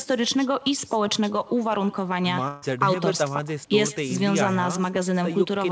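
A speech recording carries an echo with no canceller from start to finish. Every phrase is trailed by a faint, thinner copy arriving roughly a tenth of a second later. The copy sits about 21 dB below the direct speech. It sounds like the far end played the call through a loudspeaker, and its microphone fed that sound back into the line. Nothing on that side removed it. There is also a burst of packet loss from 2.48 to 2.64 s. For about 140 ms the receiver keeps extending the last sound and lets it fade, so a voiced sound becomes a held buzz and anything else a fading hiss, rather than silence. The speech then picks up further along, and the 140 ms in between is gone. Throughout, the audio has nothing above 8 kHz, which fits a G.722 call path at 64 kbps.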